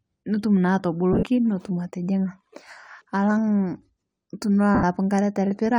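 Lost LE Audio frames at 1.13–1.23 s, with about 70 ms missing in runs up to around 40 ms, and at 4.75–4.83 s (80 ms): the LC3 decoder repeats the last spectrum with scrambled phase, giving a noisy smear rather than clean silent gaps.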